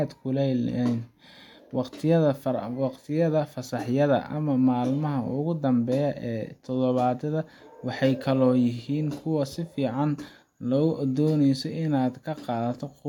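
Nothing stood out on listening through this speech recording.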